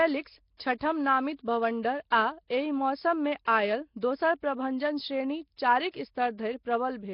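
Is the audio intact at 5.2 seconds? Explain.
No, at 5.2 seconds the speech carries the rough, hissy halo and smeared, underwater quality heard throughout the clip, likely Nellymoser compression. Its fixed two bits per sample leave weak bands with no bits, so they are filled with noise, pointing to roughly 22 kbps. Unlike a plain low-pass, that hiss sits below a hard 5.3 kHz ceiling.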